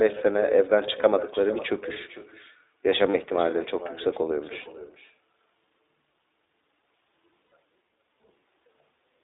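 Because the far end has no echo canceller, its microphone picks up the call from its loudspeaker and sends it back. Throughout the speech, every phrase returns about half a second later as a thin copy about 15 dB below the original.

The whole call runs through the iLBC codec, whose damage is plainly audible. Its 20 ms frames fit the 15.2 kbps mode, and the line band of 300 Hz to 3.7 kHz strips the top and bottom. The speech sounds narrow, slightly rough and synthetic.

Lost iLBC frames occur at 1.02 to 1.05 s (20 ms lost, consistent with one frame), at 3.10 to 3.16 s and 4.62 to 4.68 s (40 ms each), and at 7.51 s (60 ms). Each time, the decoder fills the gap by repeating the last pitch cycle mixed with noise, so the speech briefly holds on a buzzy, breathy vowel. It recovers almost immediately because every frame decodes on its own.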